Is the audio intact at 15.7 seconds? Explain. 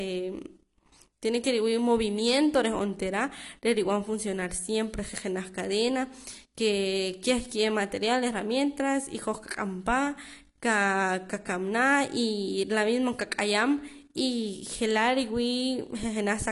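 No. At 15.7 s, as throughout the speech, the sound is dull and smeared, with a fizzy, warbling edge on sibilants and nothing above 11.1 kHz. This is likely AAC compression: the encoder coarsely quantises spectral lines and drops high bands, consistent with a low bitrate near 32 kbps.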